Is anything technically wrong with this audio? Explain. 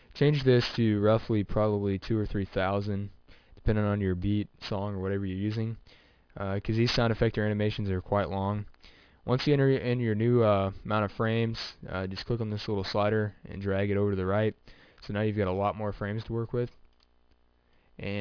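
Yes. Aliasing runs throughout: the rate was cut, likely to about 11 kHz, without filtering, so content above 5.5 kHz folds back as gritty, metallic tones roughly 20 dB down.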